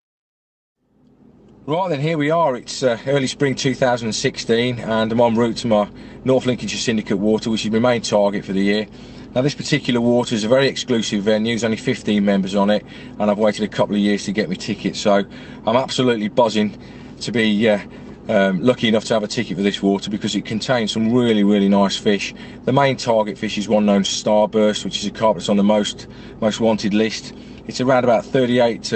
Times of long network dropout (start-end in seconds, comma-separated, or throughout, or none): 0.31-0.77